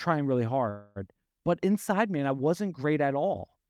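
At 0.69 to 0.98 s comes a call audio freeze. The sound stalls into a fading buzz for about 264 ms, then resumes where it stopped. Late packets likely emptied the jitter buffer.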